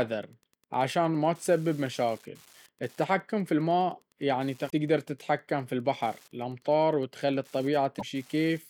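Running under the whole speech clip is Wi-Fi interference: a nearby radio's beacon, every 102.4 ms, is rectified by the audio circuit into a faint, rigidly regular ticking about ten times a second, roughly 35 dB below the speech. Unlike mains buzz, it is a comb of separate ticks rather than a continuous tone.

At 4.66 to 4.73 s, right after "التحكم في الماء يعني" and just before "تتحكم في البحر الأمطار", damaged data in the compressed stream makes the decoder misread frames and hunt for the next header. A second instance follows at 7.96 to 8.03 s. Each is a short glitch in the speech.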